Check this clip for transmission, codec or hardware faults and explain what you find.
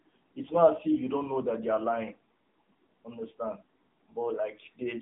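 One fault runs through the whole clip: AMR narrowband mobile codec. Nothing passes above 3.8 kHz and the band sits at roughly 200 Hz to 3.7 kHz. A vocal-tract model rebuilds the speech from a few pulses per frame, plainly audible as a buzzy, synthetic voice that fits a low mode near 8 kbps. A spectrogram shows a flat ceiling at 3.8 kHz and smeared harmonics.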